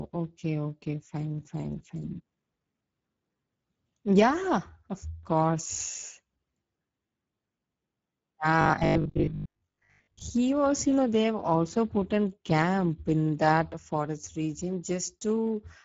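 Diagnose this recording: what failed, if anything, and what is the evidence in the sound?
The codec stage is the first problem: this speech has been through Speex, and it's plainly audible across the whole clip. There's a hoarse, noisy grain on the voice, the kind you get when CELP runs short of bits for the excitation. That points to a low-to-middle setting, somewhere around 10 kbps. The top band sounds like shaped noise rather than real detail.

The second fault sits in the driver or buffer stage. From 8.61 to 10.21 s, ending just before "was you know they", the sound turns into robotic sound from repeated short buffers: a rigid metallic buzz at 50 Hz. That pitch means 20 ms chunks are being replayed, and roughly half the audio in that stretch is repeats rather than new material. The likely cause is audio arriving too slowly, with the software looping the last buffer to cover the gap.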